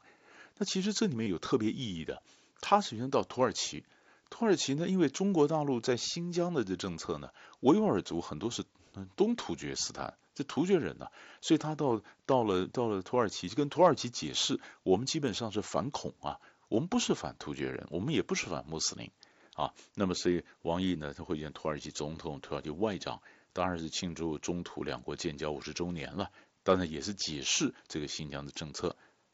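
At 1.24 s there's a short run of concealed Bluetooth headset packet loss, about 30 ms long, which fits roughly four dropped frames. The phone filled the gap by repeating the last stretch of waveform, so you get a brief buzzy held tone before a slight warble as the real mSBC speech comes back.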